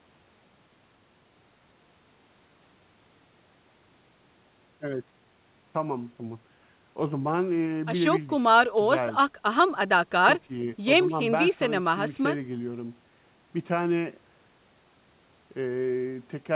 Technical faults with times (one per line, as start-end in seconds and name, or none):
none